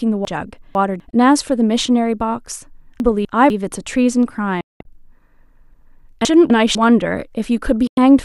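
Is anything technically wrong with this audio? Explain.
Yes. The speech has two kinds of fault.

Chunks out of order occur at 0.25 to 1.0 s, 3.0 to 3.5 s and 6.25 to 6.75 s. A 250 ms block arrives late and plays after the blocks that should follow it. In the first case it is two blocks late, in the others one. Nothing is missing. The speech jumbles briefly.

Digital broadcast dropouts occur at 1.10 to 1.13 s, 4.61 to 4.85 s and 7.87 to 7.98 s. The receiver loses valid frames and mutes, fading out over about 3 ms. The gaps are 24 ms, 216 ms scattered over 240 ms with one 192 ms hole, and 96 ms. That audio is lost.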